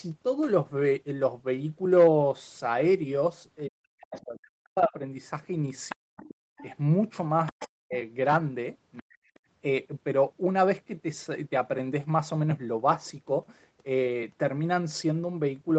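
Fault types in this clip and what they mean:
Speech suppressed in double talk: with both sides talking, the echo canceller likely mistook the talker for echo, so speech sinks by up to about 40 dB.
Other side's voice leaking through: residual loudspeaker echo escaped cancellation and is likely what sits about 15 dB below the speech near 5.9 and 7.5 s.
Background gated by the echo canceller: the canceller clamped the microphone while the loudspeaker played, dropping room sound by about 28 dB for 40 ms at 6.53 s.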